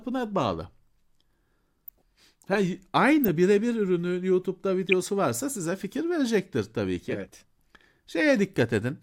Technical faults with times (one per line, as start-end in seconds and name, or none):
1.88-2.02 corrupt frame decoded
3.24-3.29 corrupt frame decoded
4.89-4.93 corrupt frame decoded